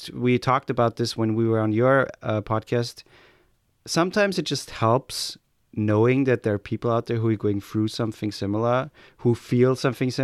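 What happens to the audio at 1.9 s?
Nothing goes wrong at 1.9 s; the speech continues intact through that moment with no audible fault.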